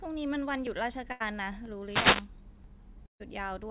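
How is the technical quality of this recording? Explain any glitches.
The recording has several distinct glitches, and its top end stops at about 4 kHz, which fits narrowband G.711 A-law telephone coding in a call path.

At 0.67, 1.66, 2.64 and 3.63 s there are tiny skips spaced almost exactly one second apart. They are most likely audio missing between chunks, with a brief sliver lost at each one-second chunk boundary and the two sides butted together.

At 1.12 to 1.22 s and 3.06 to 3.22 s there are bursts of packet loss. The receiver stretches the last sound into a held, fading sound for about 80 ms and 140 ms, before resuming further on with that stretch missing. In the second burst the fill dies away to near silence.

From 1.82 to 2.30 s a short swish of static rises over the speech. This is a wireless microphone noise hit, where the FM radio signal faded and receiver noise briefly swamped it.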